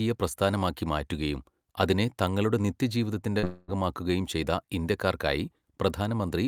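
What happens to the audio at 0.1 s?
Nothing goes wrong at 0.1 s; the speech plays through that moment intact, with no dropout, click or distortion.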